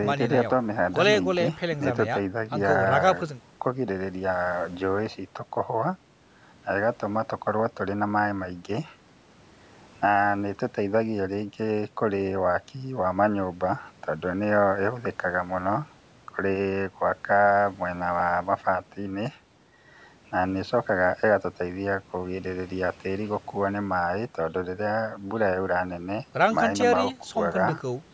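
No technical faults are audible.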